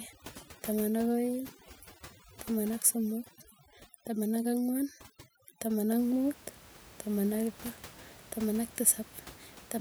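A speech recording with overdone noise removal from 0.0 to 5.99 s: a heavy denoiser gates away bands near the noise floor, leaving twinkly near-silence, before the room noise, about 21 dB under the speech, comes back in.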